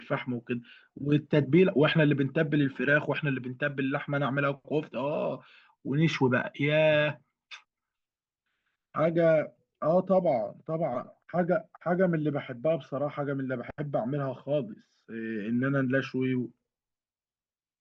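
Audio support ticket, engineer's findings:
No audible faults found in this speech recording.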